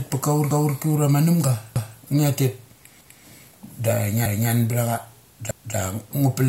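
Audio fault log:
0.51–0.76, 1.76–2.01, 3.01–3.26, 4.26–4.51 and 5.51–5.76 s, overlapping chunks: the speech was handled in 1.0 s chunks, and each new chunk began 250 ms before the previous one finished, so the last quarter-second of every chunk plays a second time at the join. The result is a regular stutter every 1.25 s, with a brief echo-like doubling.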